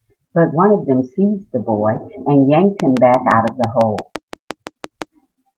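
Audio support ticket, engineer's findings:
Lost packet rebuilt from error correction, 1.95–1.97 s: brief rough, noisy patch, no gap. Fits one lost packet replaced by its low-bitrate in-band FEC copy, 20 ms.

Train of clicks, 2.80–5.03 s: regular ticking at about 5.9 per second, around fifteen clicks, about 15 dB above the signal. Likely interference or a faulty connection or power supply.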